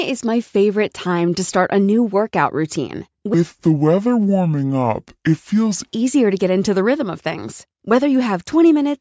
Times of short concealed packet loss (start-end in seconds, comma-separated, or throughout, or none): none